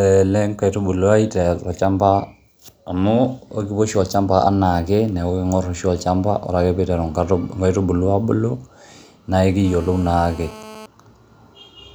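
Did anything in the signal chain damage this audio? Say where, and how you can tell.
Yes. GSM phone buzz appears from 9.65 to 10.86 s, sitting about 20 dB below the speech. The damage is in the analogue wiring: a 2G handset on a call nearby pulses its transmitter about 217 times a second, and the audio circuitry rectifies those radio bursts into a hard, raspy 217 Hz buzz rich in harmonics. It is nearly steady over its 1.2 s span, as a call produces, and has no relation to the speech.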